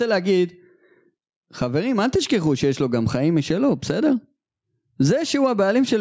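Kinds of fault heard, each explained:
Gain pumping: all the way through this speech clip the level is pulled down each time a louder sound lands, with the level swinging by roughly 10 dB. The likely cause is mic gain set far too high, with a fast limiter or compressor clamping down on every peak. Loud and soft stretches end up squeezed close together, so the whole thing sounds flattened and squashed.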